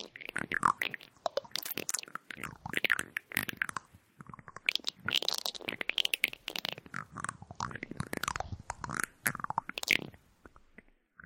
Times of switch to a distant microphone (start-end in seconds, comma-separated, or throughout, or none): none